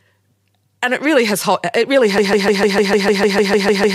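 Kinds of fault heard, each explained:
Broken-record loop: from 2.18 s to the end, a 150 ms fragment of speech repeats exactly, back to back, about a dozen times, replacing whatever should have followed. This stutter likely comes from the player, encoder or stream stalling and resending its last buffered piece.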